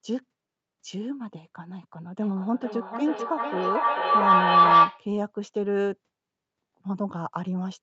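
A speech recording from a call, band-limited to 8 kHz by the call's microphone processing. From 2.21 to 5.09 s, a feedback howl takes over. Two devices in the same room share the call, so each pass from microphone to loudspeaker comes back louder. The repeats build instead of fading. They settle into a tone around 1 kHz, with the loop coming round roughly every 400 ms. At its peak it stands about 10 dB above the speech.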